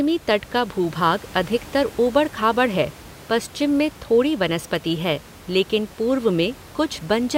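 No technical faults are audible.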